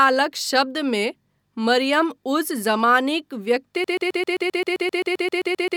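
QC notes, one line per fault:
3.84–5.76 s, broken-record loop: playback likely stalled and kept re-sending the last fragment it held, so one 131 ms slice of speech repeats exactly, back to back, 15 times through to the end, a rapid mechanical stutter replacing the speech that should have played.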